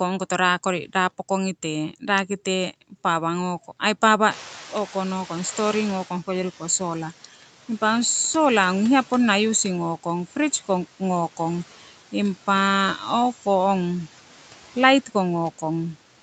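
Throughout the speech, noise suppressor artifacts are present. The background is pulled down by about 12 dB between words and rises under them.

From 4.3 to 7.1 s, the noise suppressor is catching up. The room noise jumps by about 20 dB near 4.5 s. It passes through lightly reduced, then sinks over 2.8 s as the estimate adapts, by about 10 dB.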